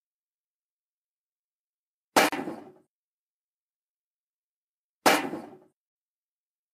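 At 2.29 to 2.32 s, a gap at a join of encoded pieces leaves a gap of about 37 ms: a flat waveform and a blank vertical spectrogram stripe with smeared edges.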